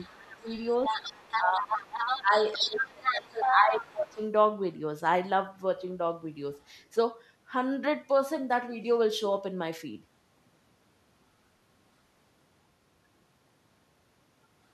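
Right from the start, 0 to 2.21 s, there's the other side's voice leaking through, sitting only a little under the main talker. The likely cause is a loudspeaker on the talker's end with the echo canceller not scrubbing it out of the mic. Over the same stretch, speech is suppressed in double talk: the talker dips hard at 0.15 to 0.49 s, by about 25 dB, then more gently at 0.88 to 0.97 s and 1.39 to 1.66 s. From 2.2 to 4.21 s it drops by up to about 20 dB for a good two seconds. That looks like the canceller likely ducking everything because both sides were talking at once. Meanwhile, from 2.53 to 3.82 s, the leaked voice is back, now roughly as loud as the talker.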